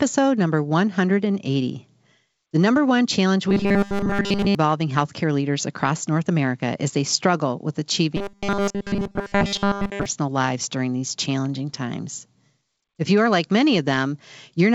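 Clock drift between sender and receiver runs through the whole clip: the sending side's clock is fast by roughly 4 percent. More audio arrives than the receiver plays out in real time, so its jitter buffer keeps filling. To keep latency from growing it must discard material continually. That shows up as small, unevenly spaced timing hiccups rather than one obvious break, heard over speech whose top end stops at 7 kHz, as a G.722 call path would give.

Repeated timing corrections run from 0.03 s to 14.67 s, and they are how the receiver copes with that drift. Short pieces are cut out again and again, always in the same direction, which amounts to playback running at about 104 percent of normal speed. Each cut is tiny, but because they come at irregular intervals the speech has a faintly unsteady, slightly hurried tempo with occasional small skips.

Robotic sound from repeated short buffers appears from 3.49 s to 4.55 s and again from 8.17 s to 10.06 s. 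In both stretches the speech turns into a stiff, metallic buzz at 200 Hz that only loosely tracks the syllables, with essentially all of the audio replaced. The likely cause is new audio arriving too rarely, so the last 5 ms is looped over and over while the real signal is skipped. That loop length sets the fixed 200 Hz pitch.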